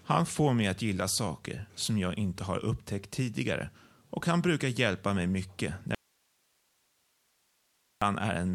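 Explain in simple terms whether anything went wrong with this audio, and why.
An audio dropout to a faint residue runs from 5.95 to 8.02 s. The speech suddenly cuts out mid-flow and is gone for about 2.1 seconds, leaving only a quiet hiss far below the normal level. It then snaps back just as abruptly, which is why it sounds like a break rather than a natural pause or fade. The likely cause is the signal being lost for a moment while the recording chain after that point kept running.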